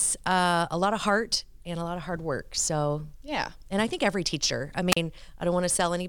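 Speech, with a wireless microphone squelch dropout from 4.91 to 4.97 s: the FM link fades, a short burst of hiss rises, then the receiver's squelch mutes the output for about 37 ms. The spectrogram shows a broadband noise smear followed by a blank vertical gap, and the waveform flatlines there.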